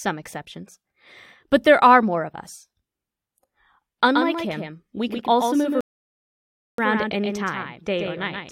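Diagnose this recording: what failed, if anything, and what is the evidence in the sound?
From 4.15 s to the end, the speech carries a doubled audio track: a second full-band copy trails the first by roughly 150 ms, a few decibels quieter (about 5 dB). The likely stage is capture or editing, where a slower second path or two misaligned copies were mixed together. It is not acoustic echo or reverb, because the copy has no decay and no room colour, and it switches on abruptly at 4.15 s rather than building up.

A rebuffering stall at the playback stage cuts the audio to silence from 5.81 s to 6.78 s, adding about 0.98 s. The player's buffer ran dry, so it paused until more data arrived, then resumed exactly where it had stopped. A network dropout would drop sound, leaving a jump in the speech when it returned. Here the speech continues seamlessly across the gap, so nothing is lost and only time is added.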